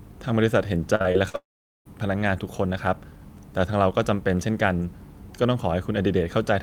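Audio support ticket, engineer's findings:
Repeated packet loss (robotic sound), 0.95–1.36 s. Choppy speech. Four gaps up to 45 ms patched by the jitter buffer's concealment, about a third of the span.

Audio cuts out 1.36–1.87 s. Brief concealment buzz, then roughly 0.43 s of silence. About half a second lost. Likely a long network dropout on the receive path.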